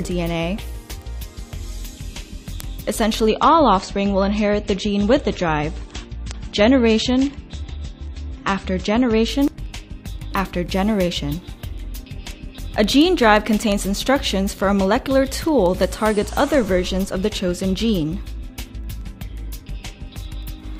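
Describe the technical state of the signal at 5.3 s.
At 5.3 s the top end is dull and smeared, with nothing above about 8.3 kHz and a watery texture. This is the adaptive stream at a lower bitrate, running from 3.28 s to 9.28 s. The connection slowed, and the player switched abruptly and without a gap to a leaner encode, which fits a drop from MP3 at 128 kbit/s to 32 kbit/s.

Sharp, uneven ticks also recur about every fifth of a second across the whole stretch from 0.13 s to 20.78 s, so they are present at 5.3 s too. These are word clock ticks. The receiving device runs on its own clock, roughly 100 ppm off the sender's, so each time the two clocks drift past each other a sample is slipped or repeated.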